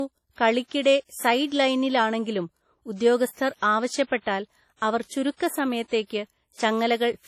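Speech, with low-bitrate artefacts present from start to finish, a dull, smeared and watery top end that the file's generous MP3 bitrate does not match. This is likely low-bitrate audio saved at a high bitrate, consistent with a 32 kbit/s WMA source re-encoded at 256 kbit/s.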